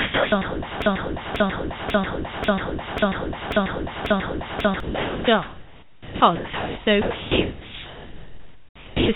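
From 0.0 to 9.09 s the sound keeps cutting out, and about 8.3 s of that span is filled with synthetic hiss in place of the real background. This is likely sound chopped by the voice detector, which switched to comfort noise. Unlike dropouts, the gaps are never silent.

From 0.82 to 4.80 s, a 0.54 s fragment plays seven times back to back, identical each time, as a broken-record loop. The sound that belonged there is gone. Unlike an echo or reverb, the repeats do not decay, and nothing new comes through beneath them. Over the whole clip the G.711 call path leaves nothing above 4 kHz.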